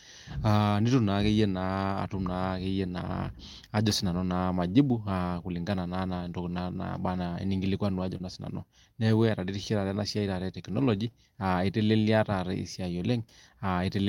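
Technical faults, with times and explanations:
7.97–8.15 s, lost packets rebuilt from error correction: about 100 ms is played from low-bitrate backup copies, fitting several lost packets, so there's no gap, but the texture turns rough and noisy, visible as grainier spectral detail.
8.17–8.22 s, short concealed packet loss: about 20 ms never arrived and was filled by extending the preceding sound, heard as a brief smear, seen as stretched, blurred harmonics.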